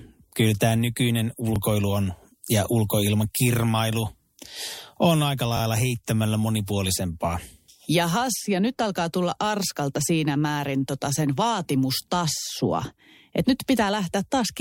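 At about 1.56 to 1.58 s there's a repeated buffer: fresh audio didn't turn up in time, so the device replayed its last chunk once more. That 21 ms slice sounds twice with a hard seam, a quick stutter-click in the speech, which fits a 1024-sample buffer.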